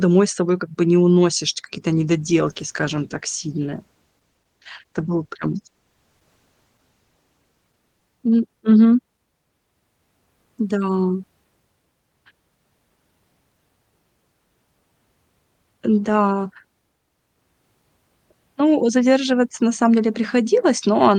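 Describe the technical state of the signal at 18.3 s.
At 18.3 s the signal is intact, with no dropout, clipping, glitch or other fault audible at that point in the speech.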